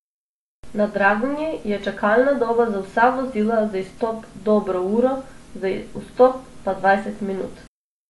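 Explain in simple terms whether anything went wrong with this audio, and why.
Yes. All the way through, the speech sounds dull and smeared, as if heard through a thin cloth, with a fizzy, warbling edge on hissy sounds like s and sh. Nothing comes through above about 11.5 kHz, so the crisp top end is gone. This is likely AAC compression squeezed too hard: to save space, the encoder throws away the highest frequencies and roughly approximates much of the rest, and that approximation can be heard.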